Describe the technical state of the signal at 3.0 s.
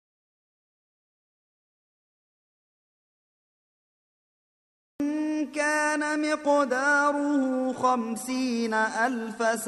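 At 3.0 s you're sitting right in the middle of an audio dropout to silence. It's already under way when the clip opens and runs until 5.0 s, so there's nothing there at all: plain silence, not even room tone. The likely cause is the input dropping out, say a lost connection or a mute, while the recorder kept writing empty samples. Whatever happened during that stretch just isn't in the file.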